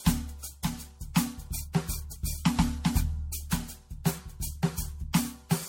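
From start to finish the music carries generation loss. It sounds swirly and hollow, with smeared transients and blurred attacks. Nothing is heard above about 16.6 kHz. The damage goes beyond what one low-rate pass would leave. The likely cause is repeated MP3 decoding and re-encoding, around seven passes, at a rate that fits 64 kbit/s. Each pass quantises on a shifted frame grid, so noise and spectral holes pile up.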